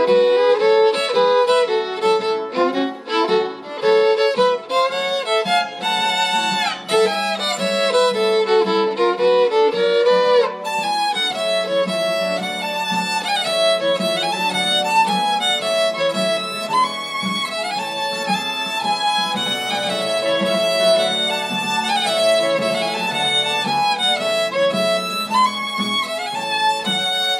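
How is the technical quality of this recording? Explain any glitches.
One glitch is audible. A doubled audio track runs from 19.46 s to 23.62 s: a full-band copy, around 5 dB quieter and roughly a tenth of a second late, starts and stops abruptly, with no decay or room colour. It likely comes from a second, slower capture path or an edit holding two copies out of step.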